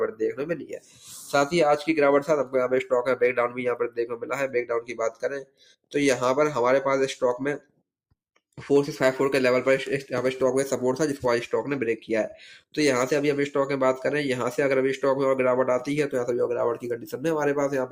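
A speech-oriented noise suppressor has been left running on this audio, mistaking sustained and ambient content for noise. Its gain swings by around 10 dB throughout, letting attacks through while held material and decays sag, so the level pumps. It also makes four deeper cuts where sustained sound is pulled down well below the rest: 0.38 to 1.06 s (about 14 dB), 3.83 to 4.31 s (about 17 dB), 4.81 to 5.94 s (about 18 dB) and 7.58 to 7.82 s (about 18 dB).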